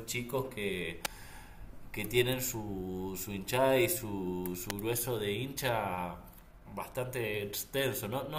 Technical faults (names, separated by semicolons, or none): electrical switching spike